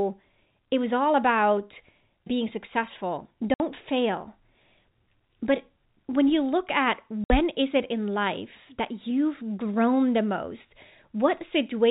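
At 3.54 s, just after "all about being successful", the speech cuts to silence for 60 ms. At 7.24 s, after "when you look at", it happens again. This is packet loss filled with silence. Each hard-edged gap fits three 20 ms packets.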